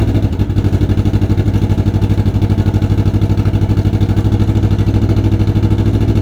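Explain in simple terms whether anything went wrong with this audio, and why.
From the start to about 4.35 s, a faint hiss and roughness rides on the sound. This is sample clock jitter: an unsteady converter clock mistimes samples by a few millionths of a second.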